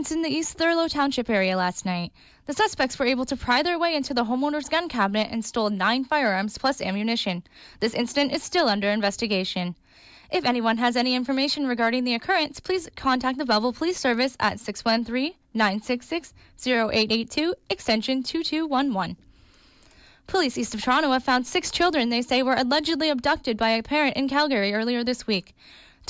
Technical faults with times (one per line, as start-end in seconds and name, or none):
none